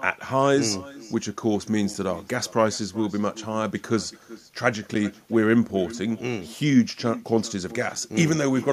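Throughout the speech, echo with no canceller repeats every phrase roughly 0.4 s later, about 20 dB quieter and thinner. It is a delayed separate copy, not reverberant smearing. At 1.94 s and again at 7.95 s, a gap between chunks drops in a 7 ms hole at 3 s chunk boundaries. Nothing is lost, unlike a dropout.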